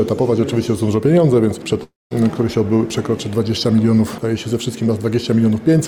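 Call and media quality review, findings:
Long network dropout, 1.83 to 2.13 s. Audio stops arriving. Concealment stretches the last sound into a fading buzz, then about 190 ms of near-silence. About 280 ms of content is lost outright, and playback resumes past the gap. Likely cause: sustained packet loss on the network path that starved the jitter buffer, with concealment covering about 272 ms.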